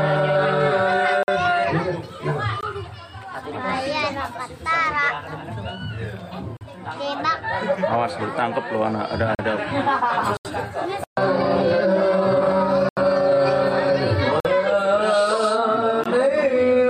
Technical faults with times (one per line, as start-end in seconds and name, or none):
1.23-1.28 block of digital silence
2.61-2.63 block of digital silence
6.57-6.61 block of digital silence
9.35-9.39 block of digital silence
10.37-10.45 block of digital silence
12.89-12.97 block of digital silence
14.40-14.45 block of digital silence
16.04 block of digital silence